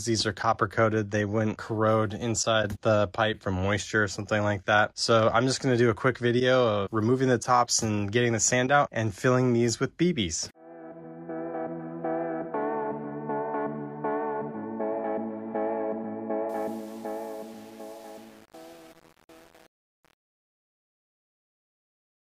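A fade-out runs from about 16.5 s to the end at 22.3 s. From 16.49 s onward it shows truncation distortion on a fade. The quiet tail turns gritty. The fade stage kept too few bits and added no dither, which fits roughly 7 bits, so the waveform collapses into coarse steps.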